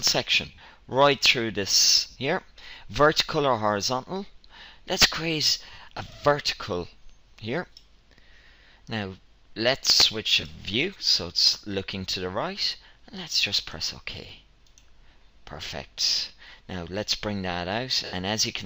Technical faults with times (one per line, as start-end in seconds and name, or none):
0.46-0.68 lost LE Audio frames
2.10-2.16 lost LE Audio frames
5.73-5.78 lost LE Audio frames
10.41-10.43 lost LE Audio frames
12.10-12.13 lost LE Audio frames
18.05-18.13 lost LE Audio frames